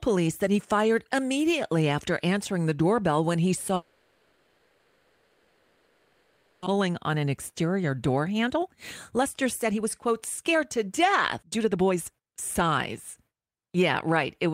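A long network dropout from 3.75 to 6.68 s interrupts this speech clip: the sound smears into a fading, buzzy continuation of the last moment rather than true silence, and when the audio resumes about 1.6 s of it is gone, with a likely cause of packets failing to arrive for nearly three seconds. A jitter buffer speed-up then runs from 6.76 s to the end, where the speech plays about 16% fast at unchanged pitch and sounds hurried as the receiver trims short pitch-period slices to work off roughly a second and a half of built-up delay.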